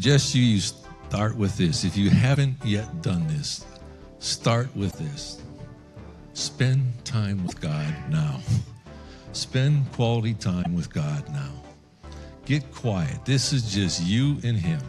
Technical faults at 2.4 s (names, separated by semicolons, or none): damaged data in a compressed stream